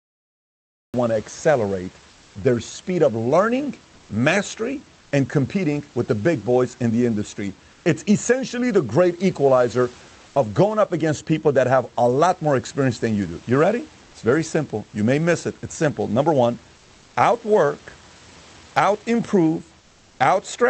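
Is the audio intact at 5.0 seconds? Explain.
No, comfort noise in place of the background runs from 4.99 to 5.11 s: for 120 ms the real room sound gives way to a steady, featureless hiss about 2 dB quieter, likely from discontinuous transmission pausing the sender.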